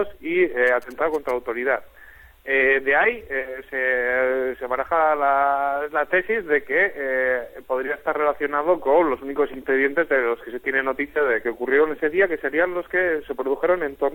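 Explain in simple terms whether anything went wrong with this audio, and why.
From 0.67 to 1.31 s there's a short run of GSM signalling bursts: a galloping dit-dit-dit of short buzzes, pulsing about 217 times a second, sitting fairly quietly under the sound. A nearby 2G phone was exchanging signalling with the network, and the audio circuit picked those radio bursts up as noise.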